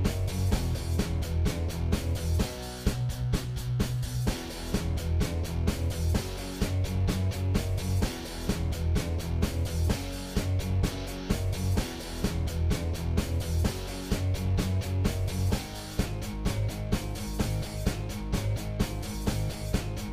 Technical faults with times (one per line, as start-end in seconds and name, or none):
none